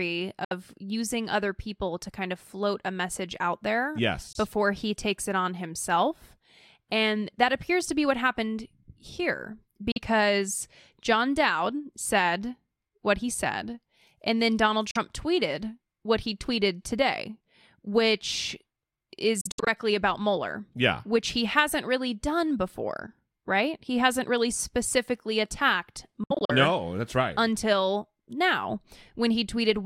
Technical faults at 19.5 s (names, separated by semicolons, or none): Bluetooth dropout